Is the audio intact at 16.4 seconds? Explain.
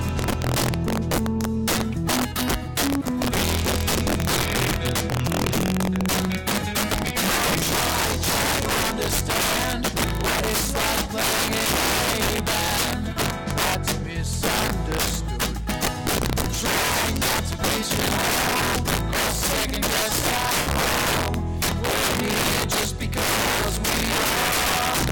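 No. Integer overflow runs through the whole clip, including 16.4 s. The signal is driven about 8 dB past the integer limit, and instead of being held at full scale, each peak that crosses it wraps to the opposite extreme. Roughly 7 percent of samples are affected, producing violent, sharp cracks on the loudest moments. On a waveform, peaks jump abruptly from top to bottom rail; a spectrogram shows bright vertical broadband streaks at each wrap.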